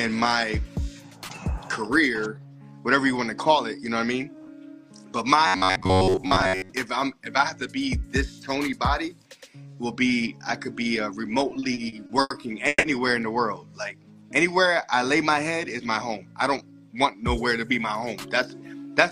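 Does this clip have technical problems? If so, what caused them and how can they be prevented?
Yes, there are four problems.

Robotic sound from repeated short buffers, 5.47 to 6.72 s: the sound becomes a rigid, metallic buzz near 94 Hz. Most of the span is repeated material. The likely cause is audio arriving too seldom, so the software repeats its last buffer of about 11 ms. A buzz near 94 Hz fits that buffer length. Larger audio buffers and reliable audio-thread scheduling prevent it.

Repeated stalls (stutter), 11.49 to 12.32 s: there are seven short gaps, filling 230 ms in total. The longest is 90 ms. Nothing is lost, but the audio drags. Packets kept arriving late, emptying the jitter buffer each time. A steadier network path or a deeper jitter buffer prevents this.

Call audio freeze, 12.68 to 12.85 s: 150 ms is filled by continuing the last sound, ending in 20 ms of silence. Playback then resumes where it stopped. 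Delayed packets likely emptied the jitter buffer. Reducing network congestion prevents it.

Jitter buffer speed-up, 15.79 to 16.25 s: the audio runs at about 109% speed with unchanged pitch. Roughly 50 ms is cut out in small pieces. Excess buffered audio was being drained. Smoother packet delivery avoids the buildup that forces this catch-up.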